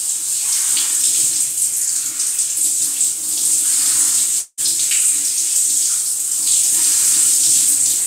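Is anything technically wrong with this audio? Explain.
Yes. From 4.39 to 4.61 s there is a long network dropout. Packets likely stopped arriving, so the receiver stretched the last sound into a fading buzz or hiss for about 180 ms, then left 30 ms of silence. When audio resumes, about 180 ms is missing.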